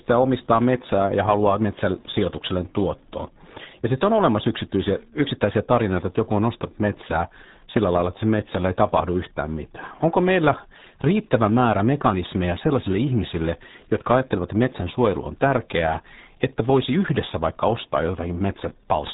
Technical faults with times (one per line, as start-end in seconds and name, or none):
0.00-19.13 RealAudio 14.4 codec